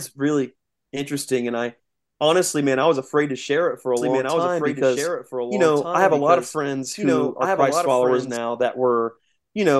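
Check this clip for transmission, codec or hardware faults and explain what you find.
One fault is present. From 3.97 to 8.37 s there is a doubled audio track, likely from a slower second capture path. The speech repeats about 1.5 s later and about 5 dB quieter. On a spectrogram, the duplicate speech pattern is shifted right and starts and stops abruptly.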